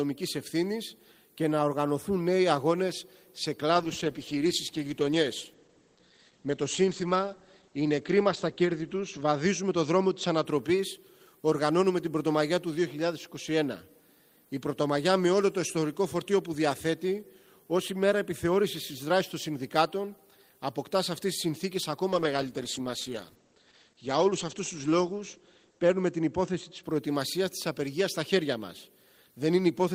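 From 3.79 to 10.51 s and 22.15 to 26.89 s, a call bitrate drop turns the sound coarse and dull above 8 kHz, consistent with about 12 kbps, degraded rather than gapped like packet loss.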